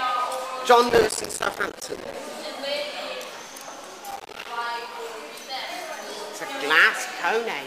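Processor overload crackle: the system missed its deadlines for buffers of around 5 ms again and again, leaving each late block silent, so gritty crackle tears through the audio from 0.89 to 2.15 s and again from 4.11 to 4.47 s.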